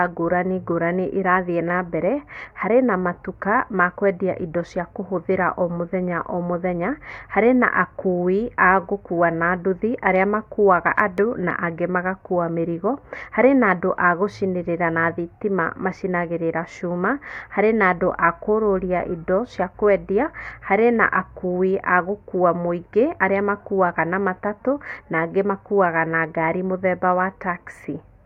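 No technical faults can be heard anywhere in the recording, and the signal stays steady and intact throughout.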